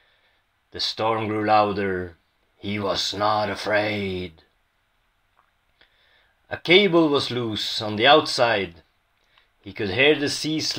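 No technical faults can be heard.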